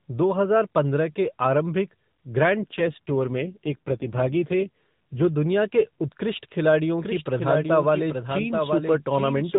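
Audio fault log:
2.62–5.33 s, AMR rate drop: the sound turns rougher, buzzier and more synthetic, with no gap and the same 4 kHz narrowband ceiling, until it recovers just before "के उत्कृष्ट खिलाड़ियों". This fits the network cutting AMR from 12.2 to 5.9 kbps to protect a weak link.
7.02 s to end, doubled audio track: right after "के उत्कृष्ट खिलाड़ियों" a second full-band copy abruptly joins, roughly 0.7 s behind and about 5 dB quieter, dry and without room colour, running to the end. The likely cause is the same audio mixed in twice, out of step.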